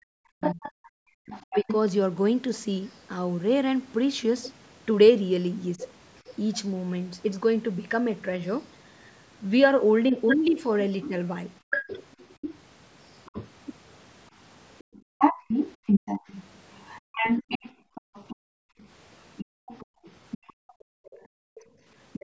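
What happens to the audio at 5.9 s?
A brief scrap of a second voice surfaces faintly under the speech from 5.8 to 5.88 s, roughly 15 dB below it. This is likely the other side's voice leaking through: far-end audio from the loudspeaker that the echo canceller failed to remove from the microphone.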